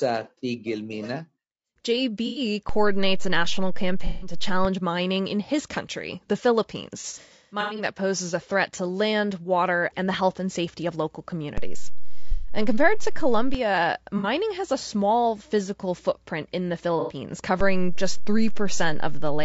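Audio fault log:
Throughout: low-delay AAC compression. The voice sounds rough and grainy, with a hiss filling the gaps between harmonics and a thin, somewhat synthetic top end. The damage is plainly audible. This is likely AAC-ELD, the low-delay AAC of video calls, at a low rate that fits about 32 kbps. Its very short frames cannot separate closely spaced pitch harmonics well, and at that bitrate too few bits remain to code the detail cleanly.
2.27–2.41 s, 4.07–4.33 s, 7.01–7.84 s, 12.32–12.51 s, 14.18–14.27 s, 17.00–17.14 s: AAC frame loss with concealment. Each is a brief smeared, noisy, phasey patch. About 90, 150, 120, 60 and 90 ms go missing in the single gaps. The gap at 14.18 s ends just before "has a small physical". Near 7.0–7.8 s, 390 ms is lost in scattered bits over 780 ms, the longest run about a tenth of a second. In each gap the decoder fills in by reusing the last good spectrum.
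2.69–4.65 s, 11.58–13.55 s, 17.61 s to the end: DC step. A low thump or click is heard as each begins. The speech carries on unchanged through them. The first ends just before "mining in his country", and the second begins just after "and safety of local". The waveform's zero line jumps to a new offset, and the first two return to the old zero line by their end times. The last step stays until the clip ends.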